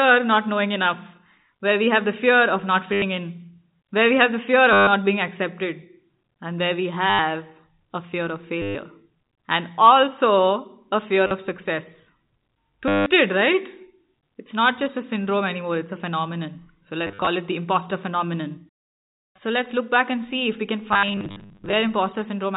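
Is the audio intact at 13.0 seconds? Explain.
No. From 12.88 to 13.06 s, packet loss with last packet repeated fills a 180 ms gap by replaying one short block. The repeats give a robotic buzz near 100 Hz that fits 10 ms packets. A plain dropout would leave silence instead.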